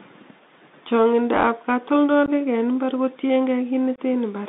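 From start to finish the audio carries the Bluetooth CVSD headset codec. Its one-bit, 64 kbps delta modulation confines the sound to roughly 200 Hz to 3.7 kHz, so a spectrogram shows a hard ceiling near 3.7 kHz. Its adaptive step lags loud, fast changes, leaving plainly audible granular grit and scratchy, distorted high sounds.

At 2.26 to 2.30 s, unconcealed Bluetooth headset packet loss cuts a 15 ms hole, which fits a couple of lost packets. A second loss at 3.96 to 4.00 s lasts 22.5 ms, likely a few packets. Each shows as a flat waveform stretch and a blank vertical stripe, with abrupt edges and briefly quieter sound afterwards.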